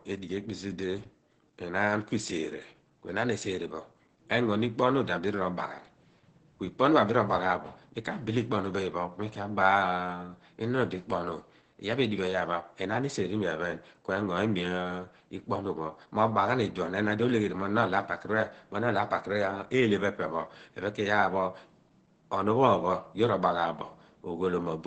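Opus voice compression throughout, consistent with low-bitrate SILK coding near 12 kbps, cuts everything above 8.7 kHz and coarsens the excitation, leaving the speech muffled, hoarse and slightly robotic.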